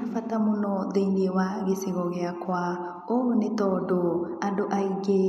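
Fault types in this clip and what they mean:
No technical fault can be heard anywhere in this speech clip. Nothing in the recording calls for a fault type to be listed here.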